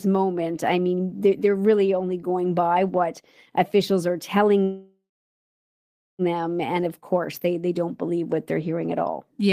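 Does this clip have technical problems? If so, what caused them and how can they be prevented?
Yes. A call audio freeze runs from 4.63 to 6.22 s, right after "by what officials are". The last sound stretches into a fading buzz, then about 1.2 s of silence. Speech resumes where it stopped, nothing lost but 1.55 s late, likely because delayed packets drained the jitter buffer. A steadier network path with priority for call traffic, or a deeper adaptive jitter buffer, would prevent it.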